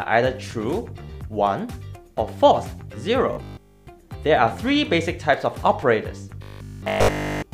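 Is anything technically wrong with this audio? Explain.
Yes, there's robotic sound from repeated short buffers at 3.33 to 3.87 s and 6.42 to 7.52 s: a rigid 50 Hz metallic buzz, likely from one 20 ms chunk looping while new audio is skipped.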